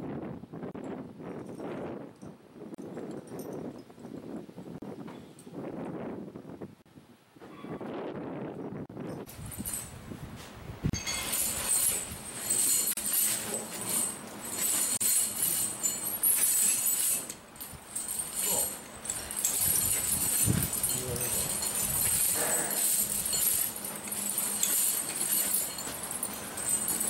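At 0.71 s a gap at a join of encoded pieces opens, a 31 ms gap. Further gaps of about 38 ms follow at 2.75, 4.78, 6.82, 8.86, 10.90, 12.93 and 14.97 s, roughly every 2 s. Each piece was encoded on its own and joined untrimmed, so encoder start delay and final-frame padding remain as dropouts with smeared edges. The sound then resumes where it stopped.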